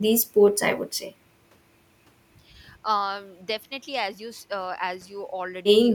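Nothing here trips anything up: the speech runs along without a single technical fault to point at.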